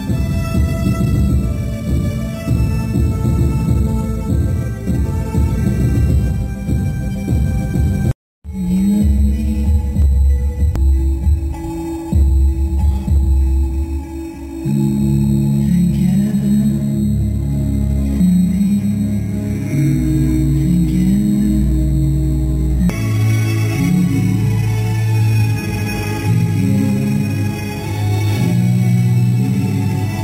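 The audio carries imaging from sample-and-hold upsampling throughout: it was raised from 8 kHz to 48 kHz by repeating each sample six times, unsmoothed. A spectrogram shows the band below 4 kHz mirrored into 4 to 8 kHz at about 26 dB down, heard as metallic fizz; zoomed waveforms show stair-steps.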